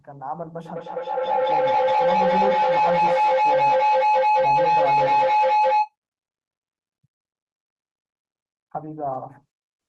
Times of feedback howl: 0.65-5.96

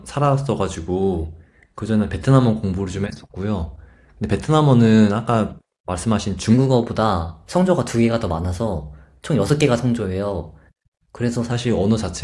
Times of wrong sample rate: 6.54-11.52

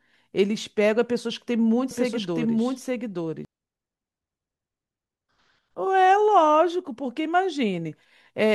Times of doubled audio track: 1.91-3.45

